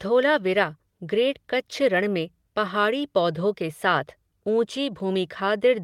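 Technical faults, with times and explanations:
No technical faults can be heard in the speech, with the signal holding steady, continuous and undistorted across the whole recording.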